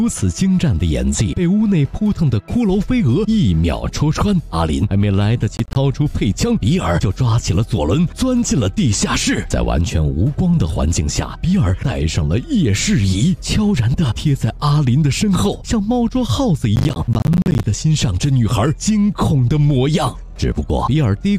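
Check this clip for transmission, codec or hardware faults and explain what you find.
Processor overload crackle appears twice, from 5.57 to 5.76 s and again, longer, from 16.76 to 17.64 s. The processor fell behind on its small audio buffers, which sound like roughly 10 ms each, and missed deadlines in quick succession. Each missed buffer left a short hard-edged silent gap, about ten in the first burst and around thirty in the second. The result is a gritty, stuttering crackle over the sound that clears once the load drops.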